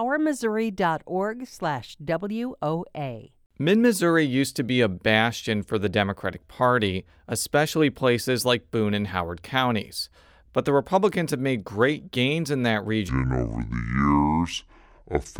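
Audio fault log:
13.09–15.39 s, section at the wrong speed: after "great gains in that", the speech drops to 0.61 times its recorded speed, sounding slow and roughly ten semitones lower, since speed and pitch fall together; likely played back against the wrong clock.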